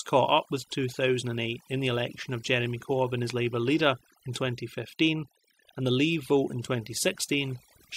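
Overdone noise removal runs from the very start to the end of the speech. A noise reduction stage was set far too aggressively, cutting any frequency band that sits close to its idea of the noise floor. The quieter parts of the voice are pulled down with the hiss, so the background collapses into near silence dotted with twinkling, chirpy specks.

Clock slip clicks run from 0.12 s to 7.93 s as faint, regular ticks roughly every tenth of a second, around a hundred in all. Each tick is a single sample dropped or repeated, which points to two devices likely running on unsynchronised clocks about 300 parts per million apart. Every time the drift builds to a whole sample, the stream jumps. The ticks stand out most on louder, sustained sounds and vanish in the gaps.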